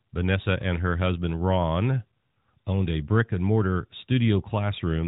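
The speech carries no technical faults, and it arrives through the AMR narrowband mobile codec, whose telephone-band sound with nothing above 4 kHz and only light coding texture fits the codec's top 12.2 kbps mode.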